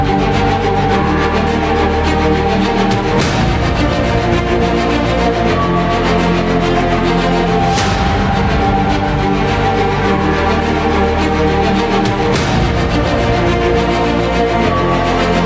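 From start to finish the level pumps, swinging by around 5 dB. Loud and soft parts sit unnaturally close together, so the whole sound feels squashed. This gain pumping likely comes from the input gain being set far too high and a fast limiter or compressor yanking it back on every peak. The call processing's band limit, with nothing above 8 kHz, is also present.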